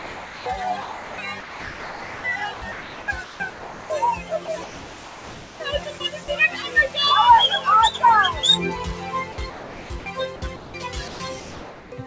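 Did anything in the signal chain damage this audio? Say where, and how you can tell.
Yes. The call processing stage left its speech noise suppressor active on material that isn't speech. Sustained parts of the sound and their decay tails are treated as noise and pulled down by roughly 15 dB, while attacks pass. On a waveform, the envelope pumps: transients stand tall and the body sags behind them. On a spectrogram, the energy after each onset fades early and in patches. The whole band stops at 8 kHz, consistent with the G.722 link.

At the sender, the sound dropped by the voice detector from 0.00 to 0.46 s. For about 0.44 s at the start, the real signal is missing and a flat, steady hiss stands in. This is likely the detector judging the opening sound as background and sending comfort noise instead. A spectrogram shows smooth, featureless noise with no structure until the real sound appears at about 0.46 s.

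The sound is chopped by the voice detector in seven stretches: 0.82–2.24 s, 2.54–3.90 s, 4.46–5.60 s, 5.98–6.28 s, 9.32–10.06 s, 10.36–10.74 s and 11.08–11.92 s. In each, the sound cuts in and out against synthetic hiss. About 1.2 s is replaced in the first stretch and only 60 ms at 5.98 s. The likely cause is the detector toggling transmission off. Waveforms show abrupt gaps filled with low, even noise, and spectrograms show blocks of uniform texture between bursts of real content.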